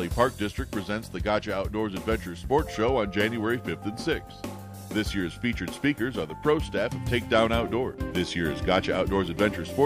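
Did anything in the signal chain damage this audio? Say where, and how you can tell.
No, nothing along the chain from capture to playback audibly damaged this audio.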